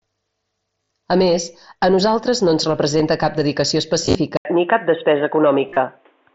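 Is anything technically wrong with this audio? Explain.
Yes, two problems over the mSBC headset link, which itself only adds a light graininess. First, concealed Bluetooth headset packet loss at 0.84–0.90 s, 2.97–3.00 s (between "a nosaltres no ens" and "cap dedicació"), 4.05–4.15 s and 5.69–5.77 s. The receiver patches each gap by repeating recent waveform, so short gaps barely show. The 60 ms stretch and the 38 ms run near 5.7 s come out as a brief buzzy hold with a little warble when real audio resumes.

Second, right after "cap dedicació" there's a dropout of about 80 ms. At 4.37 s the sound turns dull and boxy through to the end, with nothing above 3.8 kHz and a faint new hiss underneath. The level stays about the same. That's likely the input switching to a poorer device, such as a headset dropping into its narrowband call profile.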